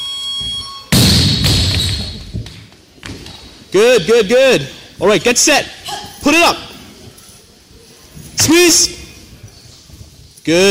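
A gain stage is overdriving the converter, pushing peaks roughly 8 dB past full scale, so the audio shows hard clipping in six bursts: 0.92–1.78 s, 3.75–4.57 s, 5.04–5.60 s, 6.26–6.51 s, 8.39–8.85 s (about 9 dB over) and 10.48 s to the end (about 6 dB over). The flattened waveform tops generate high harmonics, heard as harsh distortion on the peaks.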